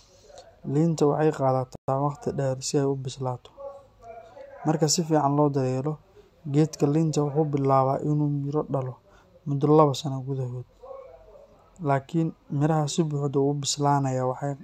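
A playback stall cuts into the speech at 1.76 s and lasts until 1.88 s: the output drops to silence for about 126 ms in mid-flow, then the speech picks up again with "waqti dheer si ay". The gap is clean rather than crackly, a sudden hole in the sound. The likely cause is the player briefly running short of buffered data, or its audio thread being held up, so nothing reached the output until it recovered.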